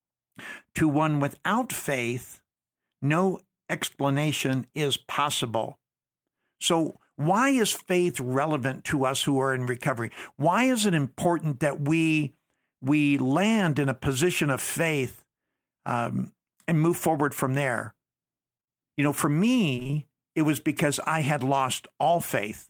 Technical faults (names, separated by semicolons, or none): repeated packet loss (robotic sound)